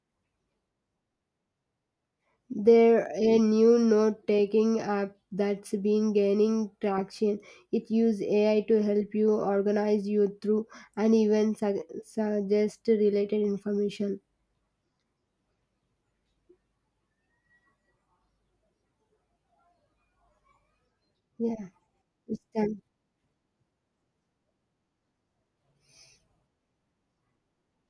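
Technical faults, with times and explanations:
No technical faults are heard.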